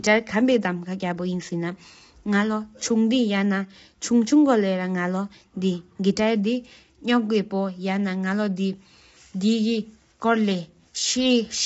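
Low-delay AAC compression runs throughout the speech, from start to finish. The voice sounds rough and grainy, with noise filling the gaps between harmonics, and nothing is heard above 7.8 kHz. The likely cause is a low-delay codec such as AAC-ELD, whose very short frames cannot resolve pitch harmonics finely and so spend bits poorly. The plainly audible damage fits a low bitrate of around 24 kbps.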